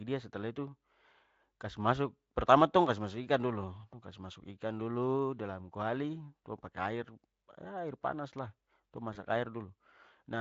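A speech clip in which the sound near 9.13 s briefly smears into a stretched, fading sound. It stays weak until about 9.24 s. This is VoIP packet loss concealed by the speech codec. The speech is lightly coded with Speex throughout, and a single lost 20 ms frame was bridged by extrapolation.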